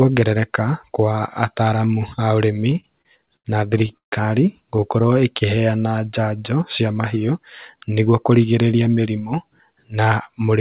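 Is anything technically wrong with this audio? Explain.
Yes. Over a call path that carries nothing above 4 kHz, which fits G.711 mu-law at 64 kbps, three timing faults are audible.

From 2.70 to 4.14 s there are repeated stalls (stutter). The speech halts twelve times, with the longest hold at 142 ms. Packets arrived late, so the jitter buffer kept running dry and stretched the last sound to cover about a quarter of that span.

From 4.80 to 5.47 s there is a jitter buffer slow-down. The speech drags at 91% speed with unchanged pitch. The receiver repeated pitch periods to rebuild its reserve, adding 69 ms.

From 7.76 to 8.13 s there is a jitter buffer speed-up. The speech sounds rushed at 109% speed, pitch intact. An overfull buffer was trimmed by dropping about 40 ms of pitch periods.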